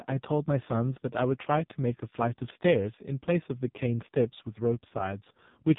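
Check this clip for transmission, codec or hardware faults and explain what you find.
One fault runs through the whole clip. It is the AMR narrowband mobile codec, heavily applied. Nothing passes above 3.8 kHz. The speech sounds buzzy and synthetic, which fits a very low AMR-NB mode near 5 kbps.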